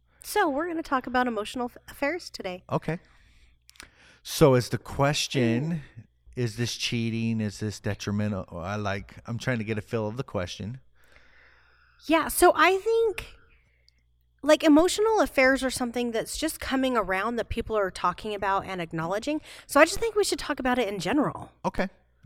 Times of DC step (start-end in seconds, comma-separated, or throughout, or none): 14.79, 19.97, 21.78